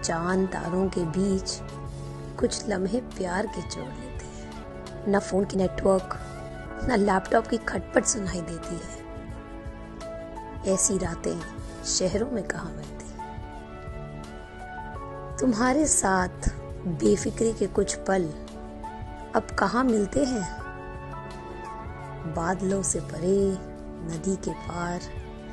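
A skip ahead at 4.63 to 4.65 s drops roughly a second of audio. That stretch was dropped while later audio was already queued, so playback leaps forward, and the two sides of the missing material are butted together with no gap.

A jitter buffer speed-up follows from 4.67 to 7.91 s, running at 116% speed and removing about half a second in total. The buffer was holding more than its target, so the receiver cut short pitch-period-sized pieces repeatedly. The audio sounds hurried while the pitch stays unchanged. A milder speed-up from 8.58 to 9.37 s runs at 105% and trims only a few tens of milliseconds, giving a slight rush.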